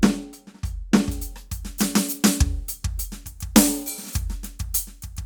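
Music here, and from 1.1 s to the end it's got pre-emphasis left on: the FM 75 µs treble boost was never undone, so 10 kHz sits about 13 dB hot, thin and sibilant.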